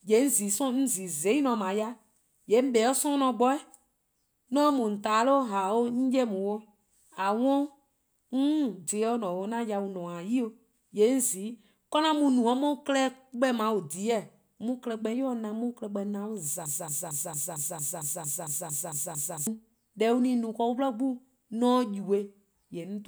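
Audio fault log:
16.66–19.47 s, broken-record loop: a 0.23 s slice of the speech repeats exactly and back to back twelve times, filling almost 3 s, and the speech that should have played there is lost. The likely cause is a stalled player or stream that kept resending the last fragment it held. Unlike an echo, the copies neither fade nor overlap. Unlike a brief stutter, the identical cycles persist for seconds at a steady rate.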